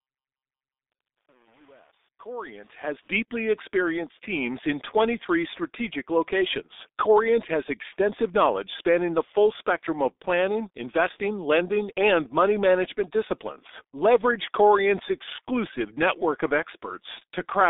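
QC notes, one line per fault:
throughout: G.723.1 codec, heavy damage; muffled, hoarse speech with blurred consonants, spectrogram shows nothing above 3.8 kHz, consistent with roughly 6.3 kbit/s coding.
0.00–3.16 s: truncation distortion on a fade, 8-bit steps without dither during the fade-in; gritty up to 2.82 s, waveform staircased, before "experienced teams in".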